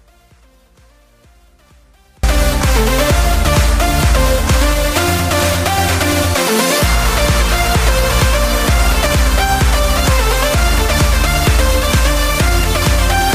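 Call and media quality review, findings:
Audio dropout to a faint residue, 0.00–2.24 s, already under way when the clip begins. The wanted signal is absent. The gap holds only a faint leak of the sound, around 35 dB below normal level. Abrupt return at 2.24 s, no fade-in. The downstream path stayed live through the break. Likely cause: an interruption at the source or capture stage while the output stage remained open, passing only residual signal.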